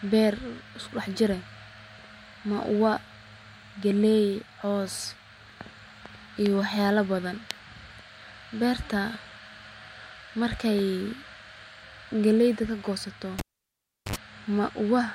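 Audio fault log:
13.39–14.16 s, cable pulled and plugged in: right after "galeyda kagoosato" a pop marks the live connector breaking contact, and the speech drops to near silence for about 0.72 s. A 72 ms burst of 50 Hz mains buzz follows as only the plug tip touches, leaving the input unshielded and ungrounded so it picks up hum. A second pop sounds as the plug seats fully and the signal path closes again.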